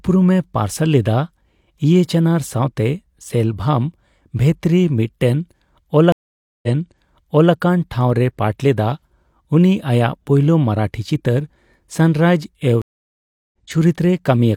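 At 6.12 s a stream reconnect drops the speech into about half a second of silence. The player then restarts its decoder and resumes 0.9 s earlier, so a stretch repeats just before "ᱴᱷᱟᱣ ᱨᱮᱭ ᱯᱟᱴ ᱞᱮᱫᱟ", by 7.53 s. After "ᱯᱳᱭᱞᱳ ᱢᱟᱨᱟᱴᱷᱤ ᱪᱤᱛᱟᱹᱨ ᱥᱟᱱᱨᱟᱭᱤᱡᱼᱮᱣ", a second reconnect at 12.82 s brings 0.72 s of silence and resumes roughly 0.7 s later, skipping material. On a spectrogram each shows as a blank vertical band across all frequencies, and the waveform goes flat before a brief fade-in.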